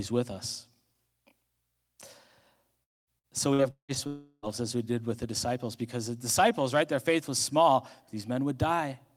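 From 2.83 to 3.10 s the speech cuts out in what is likely a long network dropout. About 240 ms of audio never arrives. The receiver stretches the last sound into a fading buzz, and that tail gives way to near silence before the speech resumes with the lost section simply absent.

Between 3.19 and 3.98 s comes repeated packet loss with a robotic sound. Four separate gaps open over this stretch, totalling about 300 ms of missing audio, the longest 179 ms. Each is patched by continuing the preceding sound, so roughly a third of the span is synthetic fill. The result is choppy speech with fragments dropped out.

A second long network dropout, again likely caused by the network, runs from 4.07 to 4.46 s. This time about 360 ms is lost, and nearly all of it is covered by the extended, decaying buzz, with only a brief moment of silence before the audio returns minus the missing part.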